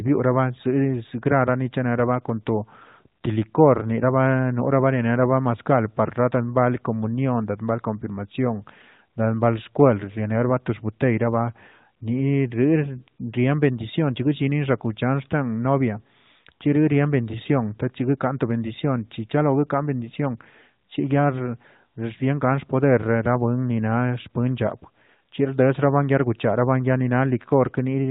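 No technical faults are audible.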